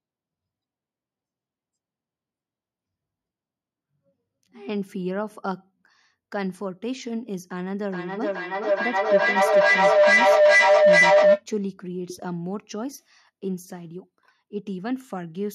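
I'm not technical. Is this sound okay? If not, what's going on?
No. From 7.91 to 11.46 seconds there is feedback howl: a second device in the same room loops the sound back into the microphone, each pass louder, until it becomes a steady whistle around 700 hertz, pulsing about every 400 milliseconds and rising well above the speech.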